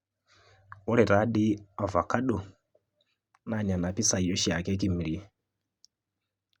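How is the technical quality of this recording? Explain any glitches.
No glitches turn up anywhere in the recording. There is nothing here that needs explaining.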